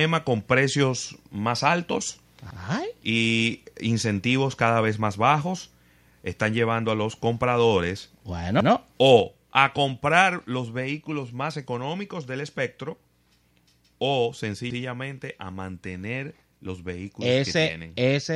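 At 2.50 to 2.60 s, right after "con precios más altos", overlapping chunks cause a brief stutter. Each 6-second chunk starts 100 ms before the previous one ended, so that 100 ms plays twice. The same stutter returns at 8.60 to 8.70 s, after "llevando a los compradores".

At 9.2 s the voice and background drop together in one step of about 4 dB. The microphone volume stepped down. The likely cause is call software lowering the input gain automatically.

At 14.70 to 14.80 s, just before "a mantener los vehículos", the overlapping chunks repeat another 100 ms. The stutters fall 6.1 s apart.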